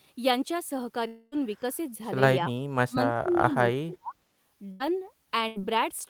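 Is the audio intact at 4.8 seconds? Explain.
No, 4.8 s lands inside a burst of packet loss running from about 4.72 to 4.82 s. A run of packets never arrived in time, so the receiver stretched out the last bit of speech it had and faded it down for roughly 80 ms. You hear the sound hang and dwindle briefly, then the speech picks up further along, with about 80 ms of what was said simply skipped over.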